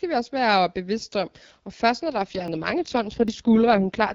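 From 2.04 s to the end, the speech turns rougher and more synthetic with no gap or narrowing of the band. This is an AMR rate drop, consistent with the AMR-WB codec stepping down from 12.65 to 6.6 kbit/s.

At 2.48 s and 3.28 s the sound jumps ahead. About 20 ms and then about 70 ms are missing. A dropped buffer (overrun) is the likely cause.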